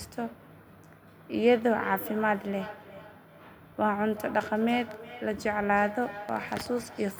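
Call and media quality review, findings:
Feedback echo between two devices, 1.45 s to end. Speech returns at roughly 400 ms intervals, peaking about 15 dB below direct level. A second device in the room replays audio into this microphone, and the local echo canceller ignores sound it did not play.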